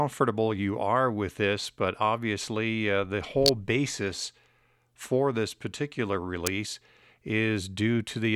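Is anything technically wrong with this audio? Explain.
Yes. The speech has two electrical switching spikes. The first runs from 3.46 to 3.49 s, between "but obviously uh the" and "basis for this particular". The second comes at 6.47 s, just after "basis for this particular". Each is a sharp snap or tight cluster of clicks laid over the speech. Both peak near -5 dBFS. The likely cause is a nearby switch, motor or static discharge arcing briefly, with the audio line picking up the burst.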